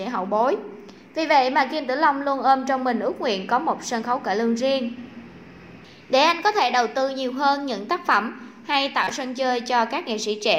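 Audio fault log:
9.04–9.11 s, corrupt frame decoded: a couple of compressed frames arrived with damaged bits and were decoded anyway, so misread gains and codes scattered energy into the wrong frequencies, producing a short burst peaking around -10 dBFS for roughly 70 ms.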